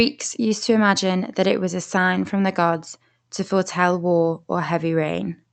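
No faults: the speech runs through an Opus call path at 48 kbps, with its top end limited to 8 kHz and only the codec's ordinary coding noise.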